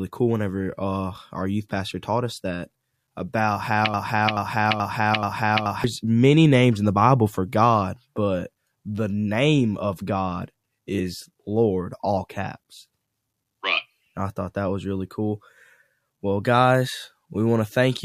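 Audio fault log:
3.94–5.84 s, broken-record loop: after "taught us that about", a 0.43 s fragment repeats exactly four times, likely a stalled stream resending its last piece, before "many names in the".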